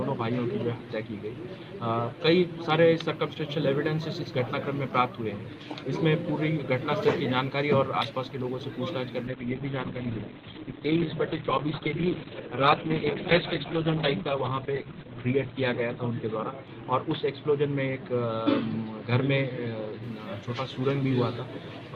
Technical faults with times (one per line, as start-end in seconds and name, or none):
9.28-20.09 call bitrate drop